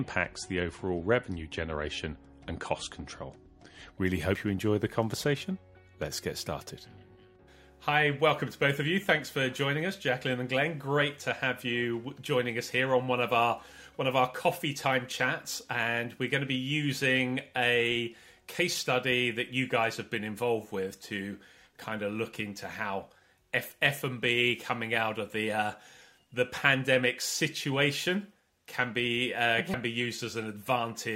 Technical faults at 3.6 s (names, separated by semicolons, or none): adaptive stream starting at a low bitrate